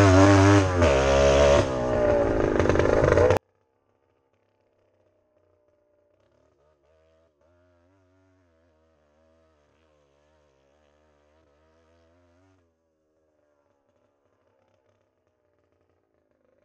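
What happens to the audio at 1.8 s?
Nothing goes wrong at 1.8 s; the audio plays through that moment intact, with no dropout, click or other fault.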